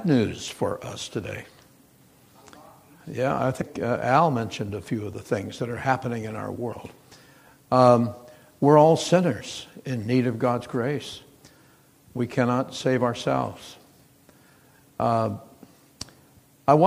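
At 3.60 s and from 6.71 to 6.73 s, damaged data in the compressed stream produces a brief glitch as the decoder misreads corrupted frames and resynchronises. On a spectrogram each shows as a broadband vertical smear.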